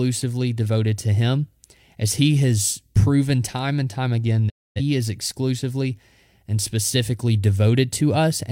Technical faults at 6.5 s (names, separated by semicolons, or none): none